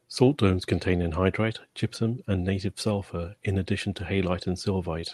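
A short speech clip carried over an Opus call path, with clock drift between sender and receiver: the sender's clock runs about 4% slow, so the jitter buffer keeps draining and has to be topped up. That shows up as repeated timing corrections from 0.25 s to 5.0 s, small repeats that stretch things by roughly a fifth of a second overall and give a slightly halting, 96%-speed tempo.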